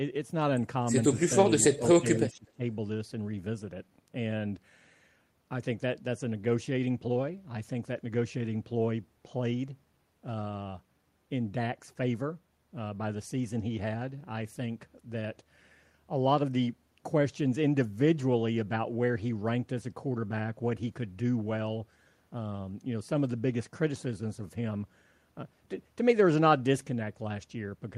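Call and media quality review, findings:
Call and media quality review, findings:

Echo leak, 1.61–1.89 s: faint delayed copy of the speech trailing it by 246 ms, roughly 25 dB below the direct signal. Likely far-end echo canceller leaving residual loudspeaker pickup in its microphone path, returned down the line.

Speech suppressed in double talk, 1.77 s: short level dip of about 5 dB, roughly 40 ms, inside the echo-leak window. Likely canceller misreading overlap as echo and attenuating.

Speech suppressed in double talk, 1.99–2.6 s: deeper dip, near 20 dB, across about half a second. Same likely mechanism: canceller cannot separate near talker from loudspeaker echo and turns both down.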